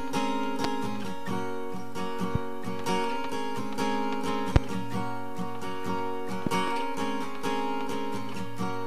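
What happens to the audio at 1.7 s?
Nothing goes wrong at 1.7 s; the audio plays through that moment intact, with no audible fault.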